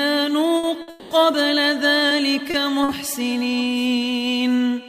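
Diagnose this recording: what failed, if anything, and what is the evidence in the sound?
Network delay is the failure, heard first as a series of short stalls from late packets at 0.57 to 0.76 s, 0.82 to 0.90 s, 2.09 to 2.13 s, 2.51 to 2.56 s and 2.84 to 2.91 s. In each, the jitter buffer ran dry and the receiver held the last sound for roughly 20 to 60 ms, giving a brief smeared sustain before the audio resumes from the same point. Nothing is cut out, which distinguishes these from packet loss, where content would vanish.

A call audio freeze follows directly at 0.90 to 1.13 s, joined to the second stall. For about 210 ms the last sound is extended as a fading buzzy continuation that never reaches silence, then the audio carries on where it stopped, having gained time rather than lost any. The likely cause is packets held up in the network long enough to empty the buffer outright. This event is several times longer than the short stalls, and its fill decays audibly instead of simply holding.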